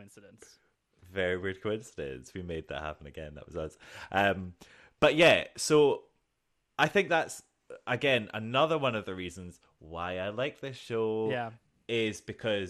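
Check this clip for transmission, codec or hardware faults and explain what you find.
There's one codec fault running the whole way through. Throughout, the speech sounds dull and gurgly, with grainy distortion, most likely MP2 compression starved of bits, consistent with roughly 80 kbps, so upper sub-bands drop out and flicker.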